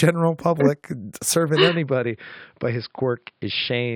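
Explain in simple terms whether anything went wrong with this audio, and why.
At about 1.69 s the sound abruptly turns duller and a little quieter, and stays that way to the end, with nothing above roughly 5.2 kHz and faint new background noise. That points to an input switched to a poorer device, most likely another microphone or a headset. A simple treble-cutting filter would not also change the loudness and the background noise at the same instant, so this looks like a change of microphone. The switch leaves no silent gap.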